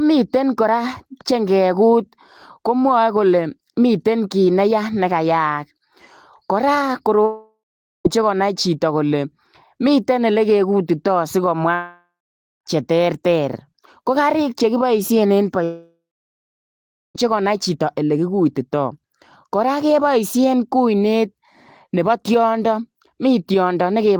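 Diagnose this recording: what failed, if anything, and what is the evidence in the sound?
Likely a long network dropout, three times: 7.25–8.07 s, 11.75–12.68 s, 15.64–17.17 s. Each starts as a fading buzz or hiss, then goes silent, and the speech resumes mid-phrase at "konai chitoo kole", "che terter ko kariik" and "konai chitoo ole kigutitai". A brief concealed packet loss never reaches silence.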